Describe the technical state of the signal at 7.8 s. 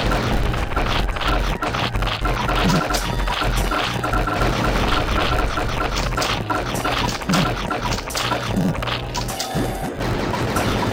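At 7.8 s the signal shows a block size mismatch (padded), present for the whole clip rather than only at that moment. One stage hands over shorter blocks than the next expects, and the remainder of each block is zero-filled, so a tiny silent gap recurs about 92 times per second. That gives a steady 91.9 Hz buzz, and the audio runs at 0.919 of normal speed. Unlike a sample-rate mismatch, the slowdown leaves timbre essentially unchanged.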